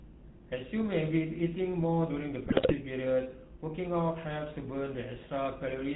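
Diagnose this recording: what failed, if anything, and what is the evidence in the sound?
The codec stage failed across the whole clip. The speech has the buzzy, gravelly roughness of the GSM full-rate codec, which fits its 13 kbit/s mode. It models the vocal tract and drives it with a sparse, regularly spaced pulse excitation, so voicing sounds coarse and rasping. The damage is plainly audible. On a spectrogram, nothing appears above 4 kHz, and harmonics look smeared and grainy rather than cleanly striated.

The transmission link failed between 2.46 and 2.74 s, where GSM bit errors break the speech into squawks, pops and gargling. Corrupted filter, pitch and gain parameters make the decoder rebuild those frames with a bent spectral shape and erratic level. The sound points to about a dozen damaged 20 ms frames and a bit error rate near 4%. The waveform shows sudden amplitude spikes and jagged envelope jumps there. 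The spectrogram shows blotchy, misplaced energy bands.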